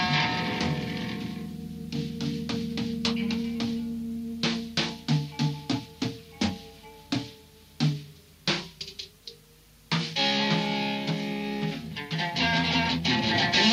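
No technical faults are audible.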